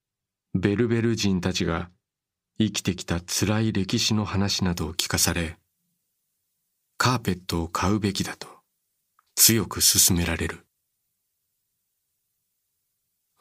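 From 4.72 s to the end, the speech has pre-emphasis left on: treble boosted along the FM 75 µs curve, with no matching de-emphasis afterwards. Highs sit about 14 dB hotter at 10 kHz than at 1 kHz, so the voice turns thin, bright and sibilant.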